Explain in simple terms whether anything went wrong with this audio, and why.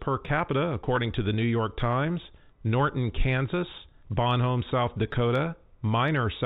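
Two tiny dropouts occur, at 0.96 s just before "to the" and at 5.13 s. Each is packet loss with pitch repetition. One packet, about 10 milliseconds of sound, went missing. The receiver filled the gap by repeating the last bit of voice, heard as a brief buzzy hold. The telephone-quality sound throughout comes from the ordinary G.711 phone format.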